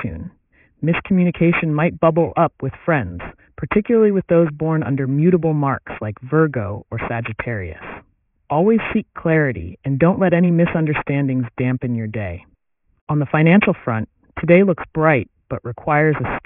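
Aliasing runs through the whole speech clip: the rate was dropped, apparently to around 6 kHz, without filtering, so energy above 3 kHz folds back into unrelated tones. Sibilants sound gritty and metallic, not merely dull as plain low-pass filtering would leave them.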